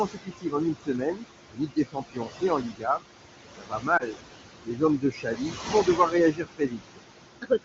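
Speech runs under steady noise suppressor artifacts throughout. Room noise that sits only about 8 dB below the speech is pulled down by about 20 dB between phrases and let back in under them. On a spectrogram the noise floor appears as patchy, blinking cells rather than an even haze. Speech cut by the noise suppressor happens eight times, at 0.05–0.55, 0.73–1.24, 1.44–3.02, 3.57–4.22, 4.61–4.82, 4.98–6.14, 6.32–6.99 and 7.42 s to the end. Soft speech is mistaken for noise, and quiet parts drop by about 15 to 22 dB, so consonants and endings are swallowed. The waveform shows them as abrupt notches inside speech, and the spectrogram as faint upper harmonics. Lost AMR speech frames cause a brief warbling dip at 3.97–4.03 s, which points to a single bad frame concealed by the wideband decoder's repeated, fading parameters. It appears as a short smeared gap in the spectrogram.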